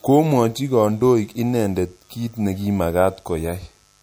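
A raspy mains buzz runs under the speech from start to finish, built on 50 Hz harmonics from switching spikes leaking in, sitting roughly 40 dB down. Throughout there's also a plainly swirly, watery quality with a dulled top end, most likely MP3 compression at a low bitrate, something like 64 kbps.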